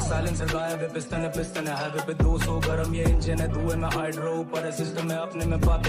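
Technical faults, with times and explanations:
No technical faults can be heard in this clip.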